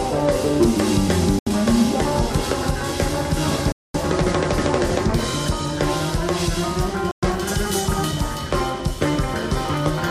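The sound drops to silence three times, at 1.39 to 1.47 s, 3.72 to 3.94 s and 7.11 to 7.23 s, before resuming. This is likely a Bluetooth stall, where delayed wireless packets let the playback buffer run empty.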